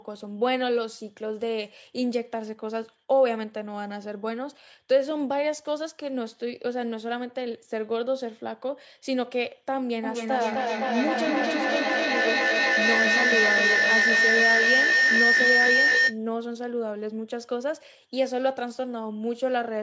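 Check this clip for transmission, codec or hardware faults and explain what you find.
One fault stands out: feedback howl from 10.04 s to 16.25 s. A shrill tone near 2 kHz swells over the sound, pulsing roughly every third of a second and peaking about 6 dB above the speech, then stops at 16.25 s. Two devices in the same room on one call form a loop, microphone to loudspeaker and back, that gains level on each trip. The repeats grow, narrow to the band the loop favours, and recur at the loop's delay until the loop is broken. The call's microphone processing leaves nothing above 8 kHz, as expected.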